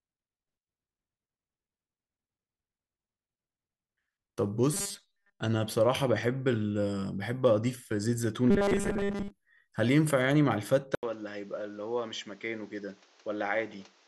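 From 4.74 to 5.40 s and again from 8.51 to 9.30 s, the likely cause is audio arriving too seldom, with the software refilling the gaps by repeating very short buffers, most of the sound replaced this way. The result is robotic sound from repeated short buffers, a rigid metallic buzz at 200 Hz, which fits a 5 ms repeat, still loosely tracking the speech.

At 10.95 s the input was likely switched to a poorer device, after a silence of 80 ms. From there to the end, the sound turns duller, the level drops by roughly 5 dB, and a new noise floor appears about 30 dB beneath the speech.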